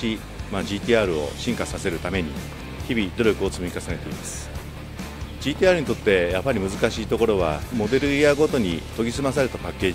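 No technical faults can be heard anywhere in this clip.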